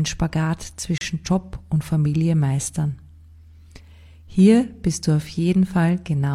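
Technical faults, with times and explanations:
0.98–1.01 s, gap between stream segments: the sound stops dead for about 32 ms and resumes just as abruptly, with hard edges on both sides of the hole. The timestamps of two consecutive segments did not line up, leaving a short stretch with no samples, and the player filled it with digital silence. No audio is lost. Everything after the gap simply arrives about 32 ms later, so the break is heard as a brief dropout rather than a skip.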